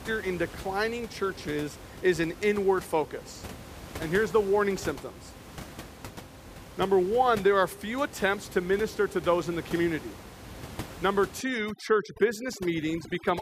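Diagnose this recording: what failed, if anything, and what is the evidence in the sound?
The failure is overdone noise removal in the call-processing stage, from 11.41 s to the end of the recording at 13.42 s. Over that stretch the background drops and breaks up into twinkling specks. The suppressor is cutting individual frequency bands hard whenever they sit near its noise estimate. With room noise only about 16 dB below the speech, quieter speech components fall inside that estimate and are removed along with the noise.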